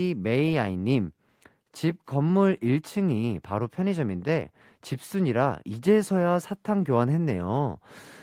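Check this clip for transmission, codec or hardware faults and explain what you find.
No faults can be heard anywhere in the recording. The speech carries on without any audible break or disturbance.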